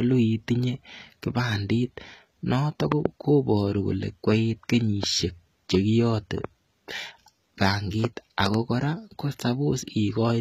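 From the start, the treble has that replicated, plainly gritty quality of HE-AAC compression. The top end is rebuilt from copied lower bands, so s sounds come out smeared and metallic, nothing survives above 14.9 kHz, and the damage fits a low bitrate around 20 kbps.

A loud pop lands right after "kipandit noto", a double hit from 2.92 to 3.08 s about 20 dB over the speech. A single softer pop at 5.03 to 5.06 s, after "noto koparu kole koiit", is about 10 dB up, and another double pop at 8.46 to 8.56 s is about 20 dB up. The speech carries on underneath each one. They're likely voltage spikes from a plug, switch or static getting into the chain.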